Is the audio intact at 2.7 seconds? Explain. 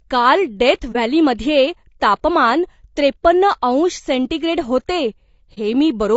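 No, not really. At 2.7 seconds the speech has the same rough, grainy texture it has for the whole clip, with a noisy fill between the pitch harmonics and a thin, artificial-sounding top end. That's the signature of low-delay AAC compression, likely AAC-ELD at something around 32 kbps. Its very short frames can't separate the harmonics cleanly, so at a low bitrate that hash fills the gaps and the highs get approximated.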